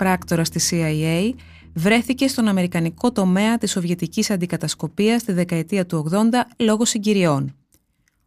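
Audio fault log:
Nothing stood out on listening to this speech recording.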